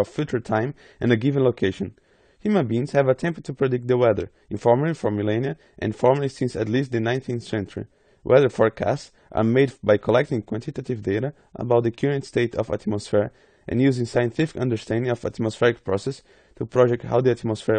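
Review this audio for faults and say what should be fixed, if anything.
Low-bitrate AAC compression has likely been applied somewhere in the chain, and its damage runs through the whole speech clip. With too few bits per frame, the encoder discards the top of the spectrum and starves the remaining bands, so nothing survives above about 9 kHz. Sibilants come out dull and fizzy, and sustained vowels carry a smeared, warbling texture, which fits a rate near 32 kbps with AAC-LC. Keep the source in a lossless format, or encode at a markedly higher bitrate.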